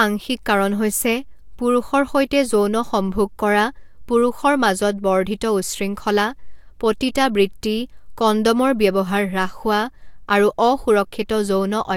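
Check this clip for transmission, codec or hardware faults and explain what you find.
Nothing wrong can be heard anywhere in this recording.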